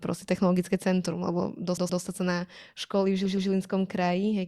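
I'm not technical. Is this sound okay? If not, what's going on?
No, it stutters twice. At 1.77 s and again at 3.25 s, a short chunk of speech, about 120 ms, plays three times in a row. That's repeated frames: the same slice of compressed audio got sent again, stretching each spot by 240 ms.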